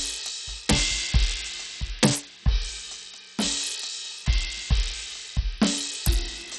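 Bluetooth SBC compression, throughout the music, is the likely cause of the damage: nothing reaches above about 13.3 kHz, and the remaining treble flickers with gritty quantisation noise and aliasing. The codec's coarse, starved bit allocation is heavy here, which fits a low bitrate around 64 kbps.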